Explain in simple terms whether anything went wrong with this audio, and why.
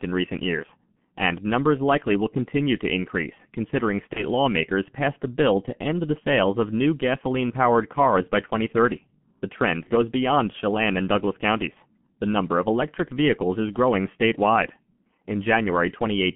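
Yes, two things went wrong. The whole recording sounds muffled and hoarse, like a poor phone call. The crisp edges of consonants are smeared, and the sound is squeezed into a narrow band between about 150 Hz and 3.4 kHz. This comes from the G.723.1 codec, an old internet-telephony format. It chops speech into 30 ms slices and squeezes each slice very hard. It updates its model of the voice only slowly, so detail is lost throughout.

Twice the sound is briefly stretched into a buzz or a coloured noise, then weakens before recovering: at 4.13 to 4.24 s and at 9.84 to 9.90 s. Each time, a piece of the call went missing on the network. That is VoIP packet loss concealed by the speech codec. The gap fits a single lost 30 ms slice. Instead of leaving silence, the decoder guessed by stretching the last sound it had and fading it out. Because each new slice builds on the previous one, the speech stays weak or distorted for a moment after the data comes back.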